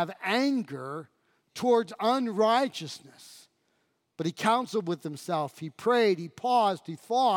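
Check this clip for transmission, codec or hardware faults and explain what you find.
The speech signal stays continuous and intact throughout, with nothing to be heard that points to a fault anywhere along its path.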